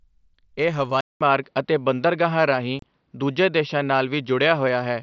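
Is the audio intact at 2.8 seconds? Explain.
No. From 2.79 to 2.83 s there is an unconcealed Bluetooth headset packet loss: a 30 ms hole where the audio drops out with abrupt edges. The hole fits roughly four lost headset voice packets.

The moment also falls inside a span from 1.01 s to the end where the input was likely switched to a poorer device. After a 200 ms silence at the switch, the sound turns dull and narrower, with nothing above 5.8 kHz, a level shift of a few dB and a new, faint noise floor.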